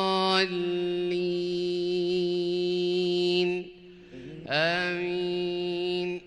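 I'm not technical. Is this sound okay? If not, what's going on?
No. At 2.59 s there is one sharp click, likely caused by dropped samples: roughly a single sample went missing, so the sound jumps abruptly. Unlike a dropout, the loss is far too brief to leave any audible gap or silence.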